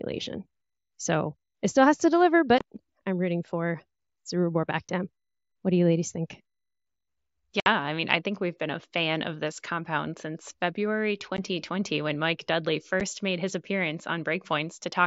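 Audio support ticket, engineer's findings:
Unconcealed Bluetooth headset packet loss, five dropouts at 2.58–2.61 s (between "still has to deliver" and "I'm rooting for"), 4.88 s, 7.60–7.66 s (right before "I mean I think"), 11.37 s and 13.00 s (just before "made his"). Hard-edged holes of roughly 7.5 to 60 ms. Hole lengths fit whole 7.5 ms mSBC frames lost on the headset-to-phone link and replaced by silence. Wideband mSBC path audible up to 8 kHz.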